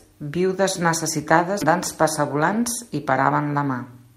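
At 1.61 to 1.63 s the speech jumps abruptly forward with no gap. This skip ahead dropped roughly 0.7 s of audio that was already waiting, and the two sides are joined directly.

At 1.87 s there is a brief jumbled moment. In this chunks-out-of-order fault, a 5.33 ms chunk arrived one chunk late and played after its successor, leaving hard joins.

From 2.19 to 2.63 s the speech sounds slightly hurried at unchanged pitch. A jitter buffer speed-up to 107% trimmed around 40 ms of pitch periods to cut excess delay.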